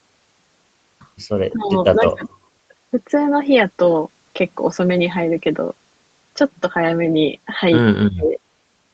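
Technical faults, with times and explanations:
1.5–1.73 s, 1.94–2.29 s and 8.14–8.39 s, speech suppressed in double talk: the speech dips by about 15 dB, then about 30 dB, then about 35 dB, for roughly a fifth to a third of a second each. The likely cause is an echo canceller ducking its own talker while the far side spoke.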